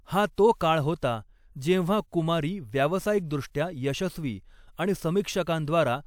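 No technical faults can be heard in the recording. Nothing in the audio stands out as a problem at any point.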